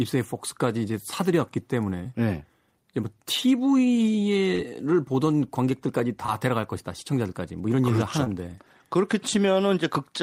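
Short concealed packet loss hits the speech at 4.55 to 4.71 s, 6.26 to 6.30 s and 8.24 to 8.28 s, with about 40, 20 and 20 ms missing. The receiver continues the last sound, so each is heard as a brief smear and shows as a stretched continuation of the preceding sound with a smooth waveform blend.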